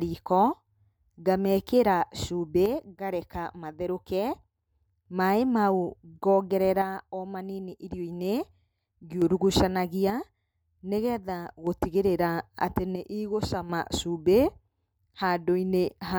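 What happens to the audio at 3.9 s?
At 3.9 s the speech sits inside a span, from 2.66 s to 5.06 s, where one channel drops out. The level falls abruptly by about 6 dB at 2.66 s and stays down for 2.4 s before snapping back at 5.06 s. The likely cause is one side of a stereo pair going silent before the mono sum, so only half of the shared signal reaches the output, and anything carried only in that channel vanishes for the duration.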